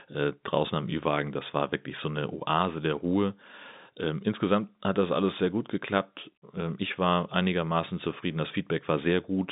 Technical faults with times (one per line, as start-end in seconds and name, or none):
none